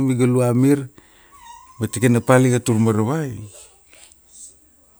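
Drift correction step from 2.70 to 3.38 s: the speech slows about 6% and drops roughly a semitone, then snaps back, likely from clock-matching software adjusting playback rate.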